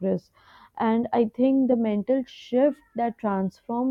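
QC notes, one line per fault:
No faults found in this speech recording. Nothing calls for a note.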